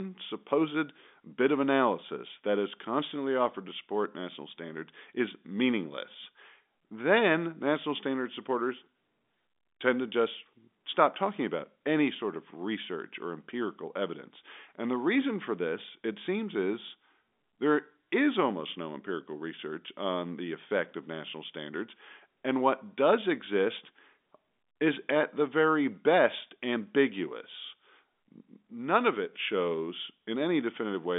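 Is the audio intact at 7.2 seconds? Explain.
Yes, the audio is intact at 7.2 seconds, with no dropout, click or distortion there, only the narrow telephone band of G.711 coding, which leaves nothing above about 3.7 kHz.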